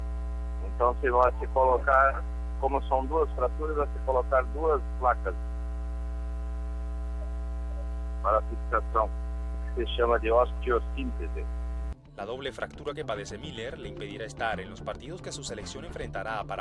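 No technical faults can be heard anywhere in the recording, and the signal holds steady throughout.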